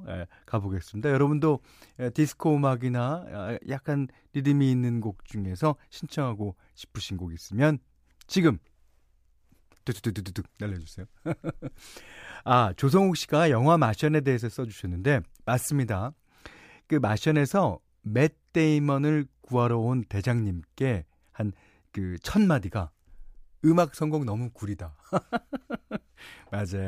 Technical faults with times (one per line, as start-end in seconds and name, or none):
none